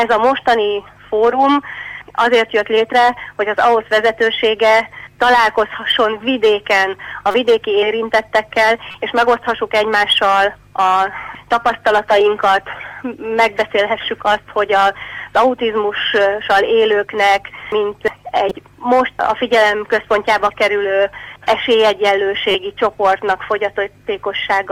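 Corrupt frame decoded at 7.31, 8.91, 18.48 and 22.51 s: damaged compressed frames decoded anyway, giving short chirps or noise bursts, seen as brief broadband smears on a spectrogram. The last and longest, about 70 ms, peaks near 0 dBFS.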